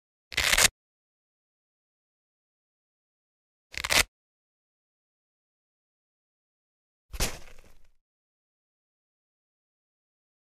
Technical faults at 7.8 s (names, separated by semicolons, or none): drift correction step